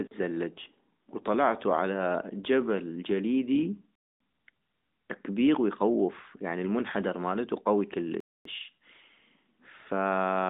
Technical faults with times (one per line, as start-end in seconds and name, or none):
3.95-4.20 gap between chunks
8.20-8.45 gap between chunks